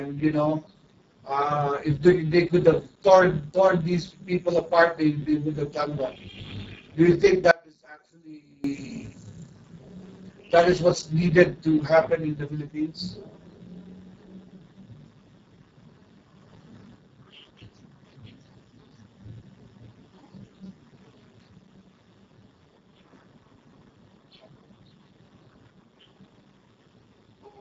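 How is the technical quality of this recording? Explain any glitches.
The technical quality is poor, with heavy codec damage throughout and one clear break in the signal.

Speex codec, throughout: the speech carries the hoarse, noisy grain of this CELP coder at a very low setting, which fits a rate near 6 kbps. With so few bits left for the excitation, the voicing turns rough and buzzy, edging toward robotic. Nothing is present above 7.7 kHz, and the upper band that remains sounds like shaped noise.

Audio dropout to a faint residue, 7.51 to 8.64 s: just after "you think", the speech cuts out abruptly for about 1.13 s. Only a faint trace of the signal remains, roughly 25 dB below normal, and then the sound snaps back. The gap is abrupt, unlike a natural pause or fade. The likely cause is that the signal feed dropped while the path after the break stayed live.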